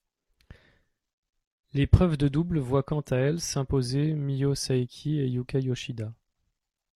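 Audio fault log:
1.70–3.70 s, adaptive stream at a lower bitrate: for two seconds the speech abruptly loses its crisp treble, and the upper band turns hazy and synthetic, as a lower-bitrate rendition replaced the normal one when the connection slowed. The thin, swirly highs fit a fall from roughly 96 kbit/s AAC to an HE-AAC rendition near 32 kbit/s. Unlike a dropout, there is no gap, and unlike a steady low-pass filter, full quality snaps back at 3.70 s.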